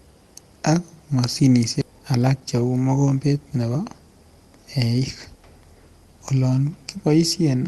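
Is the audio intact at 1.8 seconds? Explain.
No. Between 1.81 and 1.83 s the speech jumps abruptly forward with no gap: roughly a second of audio is simply missing, and the material on either side is butted together almost directly, so the flow of speech lurches. This is a skip ahead. A stretch of audio was discarded, either lost in transit or dropped by an overflowing jitter buffer, while later audio was already queued, so playback resumed about a second further on.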